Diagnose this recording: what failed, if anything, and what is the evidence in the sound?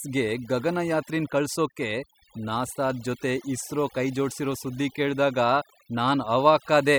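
The failure is overdone noise removal at the processing stage, and it runs for the whole clip. Between phrases the background collapses to near silence dotted with twinkling specks. The suppressor was set far too aggressively: any frequency band whose level sat near its noise estimate was cut deep or switched off. Low-level parts of the speech fell below that threshold and were removed along with the noise.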